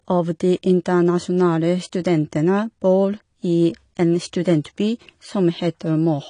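Throughout, the speech sounds dull and smeared, with nothing above 10.1 kHz. Likely AAC compression, its coarse quantisation pointing to roughly 32 kbps.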